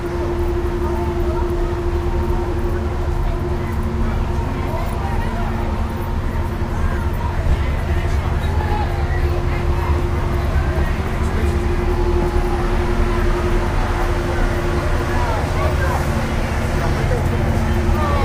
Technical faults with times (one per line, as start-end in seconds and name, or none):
5.31-8.61 call bitrate drop